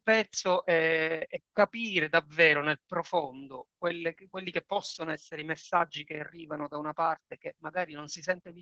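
Throughout, Opus voice compression at what sounds like 12 kbps caps the band near 8 kHz and coarsens excitation, leaving speech muffled and hoarse.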